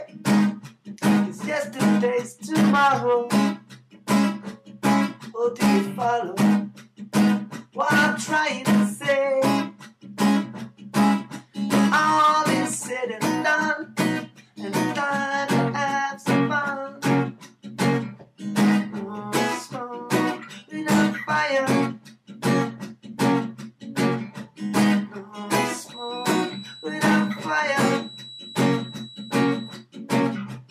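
From 25.83 to 29.87 s a 3.9 kHz feedback whistle sits well under the sound, likely a speaker-to-microphone loop near feedback: one steady spectrogram line.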